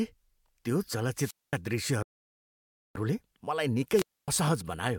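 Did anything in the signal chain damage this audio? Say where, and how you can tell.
Yes. A wireless microphone squelch dropout hit the radio link: the signal faded and the receiver muted, causing hiss then near-silence of about 220 ms at 1.15–1.58 s and 260 ms at 3.89–4.28 s.

A rebuffering stall occurred at the playback buffer, which ran empty from 2.03 to 2.95 s. The speech stops, adding about 0.93 s of silence, then resumes exactly where it left off.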